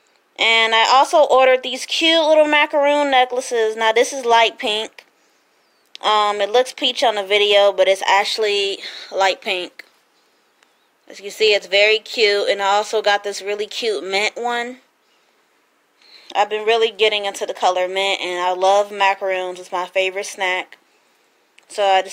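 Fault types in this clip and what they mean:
Clock slip clicks: a soft, steady rattle of single-sample slips, roughly every 70 ms from 0.17 s to 22.08 s, a few hundred in all. It's likely two unsynced clocks drifting apart by a few hundred ppm, dropping or repeating a sample each time.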